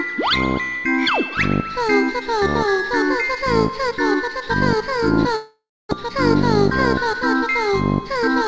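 From 5.36 to 5.93 s the sound turns into a fading buzz, then about 280 ms of near-silence, and returns with roughly 400 ms missing, likely a long network dropout. From 7.57 to 8.23 s a jitter buffer speed-up trims pitch periods, roughly 40 ms in total, so the audio runs about 6% fast at unchanged pitch and sounds hurried.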